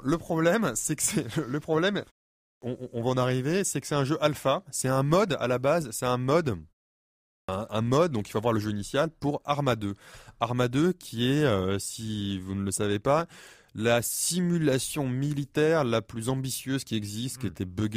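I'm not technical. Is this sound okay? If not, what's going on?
No. The playback device goes to sleep whenever the sound stops briefly and needs a moment to wake up again, a fault called clipped start after a pause. Each time, the first quarter-second of sound after a short pause is lost, so the speech jumps in abruptly. This happens at 2.36 s, after "que c'est le problème" and a one-third-second pause, and at 7.22 s, after a pause of about half a second, just before "mode donc il faut".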